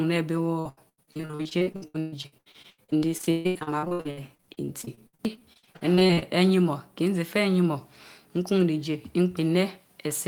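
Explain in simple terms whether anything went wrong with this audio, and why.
Repeated packet loss (robotic sound) runs from 0.59 to 6.24 s of this speech. Dozens of short gaps, the longest 140 ms, were each filled by stretching the last bit of sound, so over 40 percent of that stretch sounds choppy and robotic.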